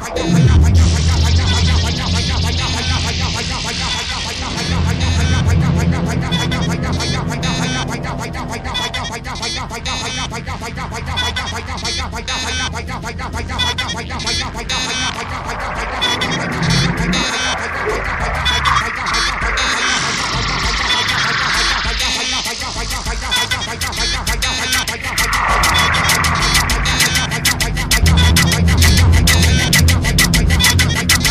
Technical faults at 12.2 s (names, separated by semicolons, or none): hard clipping